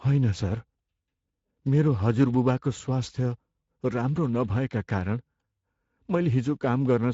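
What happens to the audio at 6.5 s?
At 6.5 s the Speex codec is still starving the excitation of bits, consistent with about 16.8 kbps, leaving speech plainly hoarse and noisy, with nothing above 7.7 kHz.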